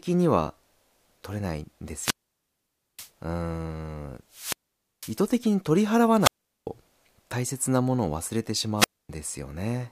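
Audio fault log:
1.94–3.11 s, 4.30–5.20 s, 6.19–6.68 s, 8.77–9.10 s: wireless microphone squelch dropout. The FM radio link fades until the receiver's squelch gates the output, so each event brings a brief surge of hiss, then near silence lasting 0.88, 0.50, 0.40 and 0.25 s, before the speech resumes.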